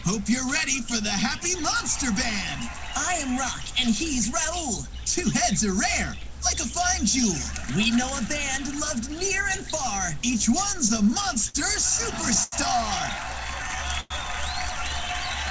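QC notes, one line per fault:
10.78–11.56 s and 12.10–12.54 s, repeated stalls (stutter). Packets reached the receiver late, so the jitter buffer kept running dry. The first run has seven short gaps, the longest about 51 ms. The second has four, the longest 86 ms. Each gap was bridged by extending the last sound, about 107 ms and 116 ms in total. Nothing is lost, but the sound drags and catches, with about a quarter of the second span concealed.
13.31–13.77 s, jitter buffer slow-down. The buffer was short of reserve, so the receiver stretched the audio by repeating tiny stretches of it. About 42 ms is added over this half second. Playback runs at about 92% speed with the pitch unchanged. Sounds here come out slightly drawn out, and a faint warble may be heard as the repeated fragments stack up.
14.00–14.12 s, call audio freeze. The sound stops advancing for about 100 ms and the last moment is held as a brief fading buzz or hiss. 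Roughly the final 20 ms of that falls to silence. Then the audio resumes exactly where it stopped, so nothing is missing. A gap has simply been inserted. The likely cause is packets held up in transit, which emptied the buffer and pushed the playout delay up by about 100 ms.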